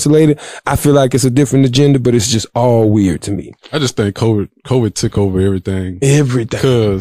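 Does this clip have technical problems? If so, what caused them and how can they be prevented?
No, this clip has no technical problems, so there is nothing to prevent.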